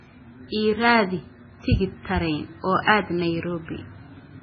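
Throughout the speech, the sound is dull and watery, with nothing above about 6.2 kHz and a swirling, chirpy texture on s sounds. This is likely heavy MP3 compression at a very low bitrate, which fits around 16 kbps. The encoder has removed the treble and keeps switching weak frequency lines on and off.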